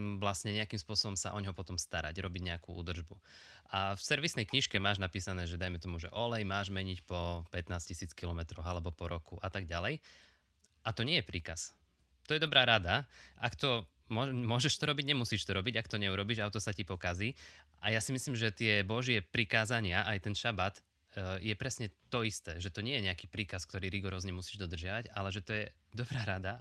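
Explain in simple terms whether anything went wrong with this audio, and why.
Some packets of this speech were lost in transit at 4.63 to 4.85 s, right after "v servisnej", and again at 12.45 to 12.51 s. Each was a lost packet rebuilt from error correction: a rougher backup copy filled in, so there's no silence, just briefly coarser, noisier sound.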